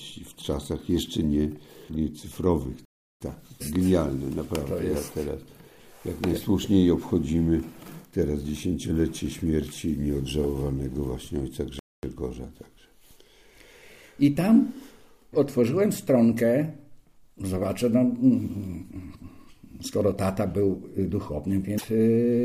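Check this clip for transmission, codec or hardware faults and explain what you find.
There are three faults here: two dropouts and one glitch near the end.

From 2.85 to 3.21 s and again from 11.79 to 12.03 s the sound simply stops, for about 0.36 s and 0.24 s, then resumes. That's most likely a playback stall, where the player was starved of data or its thread got blocked.

At 21.74 to 21.84 s there's a short glitch. That's damaged data in a compressed stream: the decoder hit bad frames, lost sync and had to hunt for the next valid frame header.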